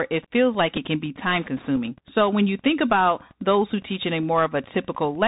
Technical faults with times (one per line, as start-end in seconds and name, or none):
0.00-5.28 Wi-Fi interference
0.00-5.28 Bluetooth CVSD headset codec
0.77 Bluetooth headset packet repeated
1.76 Bluetooth headset packet repeated